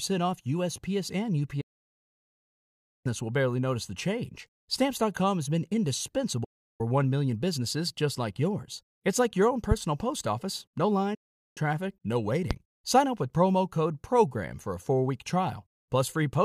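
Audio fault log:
1.61–3.06 s, 6.44–6.81 s, 11.14–11.58 s: digital broadcast dropout. The receiver stopped getting decodable frames and muted with a fast 8 ms fade, leaving silent holes of 1.44 s, 0.35 s and 0.42 s. The gap lengths fit whole 32 ms frames being discarded, and that speech is gone for good.
9.71–9.74 s, 12.51–12.54 s: loud pop. A single sharp pop sits on the speech each time, roughly 15 dB and then 20 dB above it, while the speech carries on underneath. It is likely a brief voltage spike, such as a switch or static discharge, shaped by the following circuitry.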